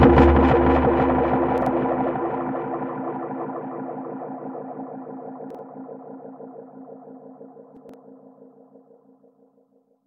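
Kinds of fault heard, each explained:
Chunks out of order: A short block of audio plays later than it should, after the blocks meant to follow it. Nothing is lost, but the sequence is scrambled. Each block lasts about 43 ms. At 1.58 to 1.66 s and 5.50 to 5.59 s, one block is one place late. At 7.77 to 7.94 s, a block is three places late. Each spot sounds jumbled.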